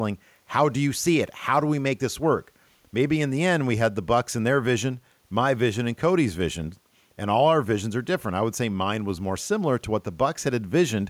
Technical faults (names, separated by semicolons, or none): none